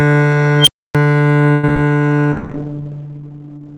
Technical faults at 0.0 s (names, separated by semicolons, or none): none